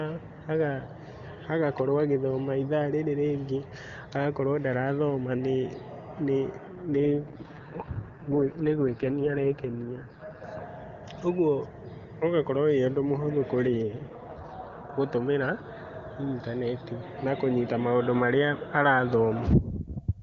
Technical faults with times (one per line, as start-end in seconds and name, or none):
6.67-10.44 AMR rate drop
13.66-14.90 AMR rate drop